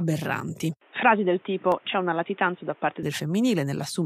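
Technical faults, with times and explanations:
0.81 to 3.03 s, input switched to a poorer device: The speech suddenly turns dull and boxy, then clears again at 3.03 s. Nothing is heard above 3.7 kHz during this stretch, so the brightness of consonants is lost. There is no gap at either switch and no clear jump in loudness. A new background noise sits roughly 35 dB below the speech. This is likely a change of input to a narrower-band microphone or headset profile.
1.72 s, overlap between stream segments: A single click or tiny skip occurs here. Two segments of the stream claim the same stretch of time. The player trims the shared portion, although that sound was never actually doubled. About 18 ms of the signal is lost, and the waveform jumps where the pieces are joined. A join appears only once, which fits segments about 6 s long.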